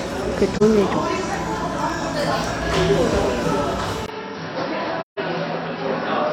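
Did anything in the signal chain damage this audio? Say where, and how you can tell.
Yes. The codec stage shows AAC frame loss with muting. At 0.56 to 0.63 s the audio drops out for about 43 ms, and at 5.00 to 5.19 s for about 171 ms, which fits four lost frames. The decoder zeroed those frames. Overlapping windows fade each hole in and out.

At the capture stage, the audio changes at 4.06 s and stays changed to the end. There is a 20 ms silence at the switch. After it, nothing is heard above 5.7 kHz, the level falls by about 5 dB, and new background noise sits roughly 40 dB below the signal. The likely cause is the input being switched to a poorer device.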